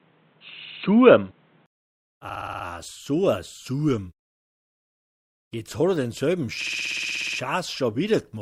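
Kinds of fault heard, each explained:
Input switched to a poorer device: From the start to 1.68 s the sound is dull and boxy, with nothing above about 4.1 kHz, a different background hiss roughly 40 dB under the signal, and a level around 5 dB off. It then clears after a 20 ms gap, most likely a switch back from a weaker microphone or headset profile. Unlike a plain low-pass filter or codec bandwidth limit, the tone, level and noise floor all change together at one instant.
Repeated frames: The same 60 ms block plays over and over, which fits a short run of compressed frames being decoded again. It repeats 3 times at 0.64 to 0.82 s, 6 times at 2.29 to 2.65 s, 14 times at 4.43 to 5.27 s and 13 times at 6.61 to 7.39 s, adding 180, 360, 840 and 780 ms. Unlike an echo or a dropout, each copy is identical and at full level, making a mechanical stutter that stretches the audio.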